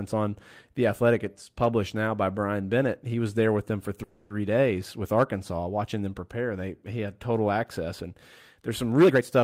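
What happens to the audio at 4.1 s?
Packets were most likely held up in transit, letting the jitter buffer run dry, so a call audio freeze occurs from 4.03 to 4.32 s. For about 270 ms the receiver keeps extending the last sound as a fading buzz or hiss rather than going silent. When the packets arrive, the speech resumes exactly where it paused, so nothing is lost, but everything afterwards plays about 270 ms later than before.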